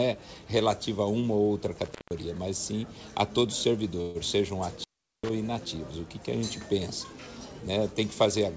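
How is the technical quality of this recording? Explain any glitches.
The recording has three glitches: two dropouts from a loose connection and one brief stall, all carried over a call link whose sound stops at 8 kHz, which fits a wideband G.722 codec at 64 kbps.

At 1.85 to 2.19 s and again at 4.77 to 5.30 s, the sound cuts out with crackle at each edge, leaving faint hiss. This is intermittent contact, a loose plug or cable opening for about 164 ms and about 396 ms.

At 4.01 to 4.18 s, the last sound smears into a fading buzz or hiss for 138 ms, then carries on with nothing lost and everything after it sitting 138 ms later. This is a call audio freeze, likely caused by delayed packets draining the jitter buffer.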